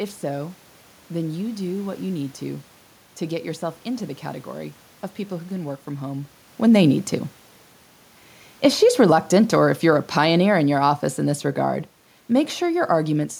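Automatic gain falling affects this speech recording from 8.85 s to 13.32 s. The gain control judged the input too loud or its background noise too strong and eased down by about 7 dB, so voice and room noise sink together.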